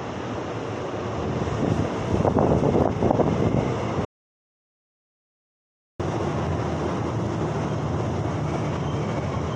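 At 4.05 s the sound just drops out, and it stays gone until 6.00 s, so close to 2 seconds vanish. That's an audio dropout to silence: the gap is silent with no room tone or hiss underneath, and whatever was happening in that stretch is simply lost. The likely story is that the input disappeared briefly, say a link failing or a mute getting hit, while the recorder kept writing silence.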